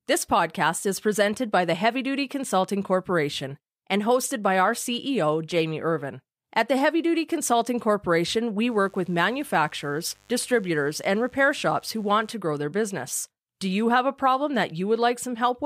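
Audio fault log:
8.68–12.34 s, mains buzz: a steady, raspy buzz sits under the speech for just under four seconds, well below it at roughly -35 dB. It is built on 50 Hz mains, with sharp switching spikes arriving twice per cycle, so the interference carries a dense ladder of harmonics reaching up into the kilohertz range. That spiky, harmonic-rich content is what gives it an edgy rasp rather than a smooth low hum.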